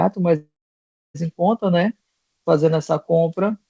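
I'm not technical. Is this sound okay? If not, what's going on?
No. From 0.36 to 1.16 s there is a call audio freeze. The sound stalls, the last bit stretches into a short fading buzz, and then about 0.66 s of near silence follows before the speech picks up exactly where it stopped. This is likely the call's data arriving late. Unlike a dropout, nothing is lost. The speech is simply pushed about 0.79 s later.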